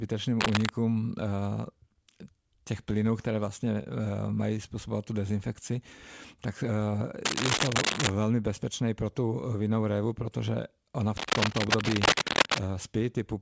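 From 0.40 to 0.70 s, again from 7.25 to 8.11 s just before "bezpečné pro", and from 11.17 to 12.58 s after "révu protože ona v", there's cable scratch noise. It's dense, ragged rustling sitting a little above the speech, most likely a worn cable or connector being moved.

Between 3.65 and 4.39 s, right before "způsobovat tu dezinfekci", you get a jitter buffer slow-down. The receiver padded out its reserve by repeating tiny chunks, adding 52 ms, so delivery drops to 94% speed. Sounds stretch slightly while the pitch stays put.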